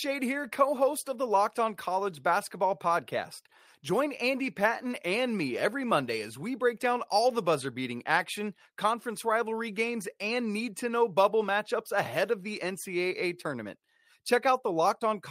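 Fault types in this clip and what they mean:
No fault types are present in the clip, so there is nothing to list or explain.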